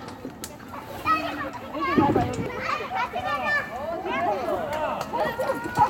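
Dropped buffers, likely from an overrun, at 1.37, 2.46, 3.92 and 5.20 s: each time a chunk of the everyday sound is skipped, about 20 ms at the first and last and about 70 ms at the middle two. The two sides are butted together, giving a jump.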